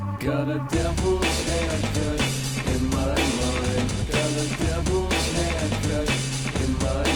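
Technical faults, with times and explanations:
2.26 to 3.35 s, call bitrate drop: the sound turns rough and muffled, and the high end is cut away. The encoder was given far fewer bits, which fits a fall from 48 to 16 kbps. This lasts about 1.03 s, then quality recovers.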